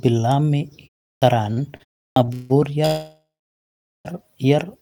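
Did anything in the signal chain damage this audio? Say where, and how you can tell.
Yes. Clipped start after a pause at 1.18 s and 2.12 s: after pauses of about 0.38 s and 0.36 s, the speech begins abruptly, losing its first 37 ms and 43 ms. The playback device slept through the silence and needed time to wake and lock again.

Repeated stalls (stutter) between 1.53 s and 2.52 s: the speech drags through five short gaps totalling 284 ms, the longest 160 ms, with nothing missing. Late network packets repeatedly drained the jitter buffer, and the receiver stretched the last sound each time until delivery resumed.

Call audio freeze from 2.86 s to 4.07 s: the sound holds and fades for about 1.2 s, including roughly 0.8 s of silence, then continues exactly where it stopped. That pattern points to packets likely held up in the network, emptying the jitter buffer until they arrived.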